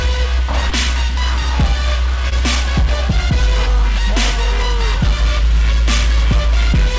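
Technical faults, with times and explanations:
0.70–0.73 s and 2.29–2.33 s, short concealed packet loss: each time about 20 ms of audio, fitting one lost packet, missed the decoder's deadline. The receiver stretched the preceding sound to fill the gap, then blended back, leaving a brief smear or wobble.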